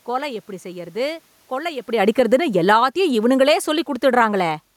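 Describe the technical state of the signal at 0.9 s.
At 0.9 s the signal is intact, with only the room's own background noise under the speech and no dropout, distortion or other technical fault.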